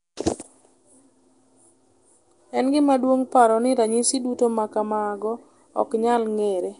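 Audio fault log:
throughout: Nellymoser compression. The speech has likely been through Nellymoser Asao, the old Flash microphone codec. It codes short blocks on a fixed, small bit budget, so quieter frequency bands get no bits and are refilled with synthetic noise. The damage is plainly audible: a gritty, hissing fringe clings to the speech, and the whole clip sounds blurred and submerged. Nothing remains above 10.6 kHz, which fits a bitrate of about 44 kbps.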